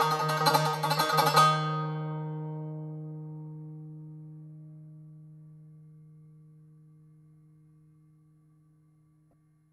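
Near the end of the music, from 9.31 to 9.33 s, one corrupt frame is decoded. Damaged bits in a single compressed frame were played as if valid. Misread values put energy at the wrong frequencies. The result is a brief, very faint glitch.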